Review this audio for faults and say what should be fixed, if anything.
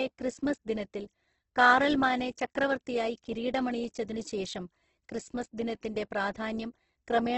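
Throughout the speech the sound is rough and grainy, with a dull top end: nothing is present above about 8.2 kHz, and the upper bands are filled with noise-like texture rather than clear detail. This is likely heavy Opus compression in its music (CELT) mode, which preserves each band's energy but, short of bits, substitutes folded or noise content. The narrowing to wideband and the damage fit a bitrate around 12 kbps. To prevent it, encode at a higher bitrate or keep an uncompressed or lossless master for editing.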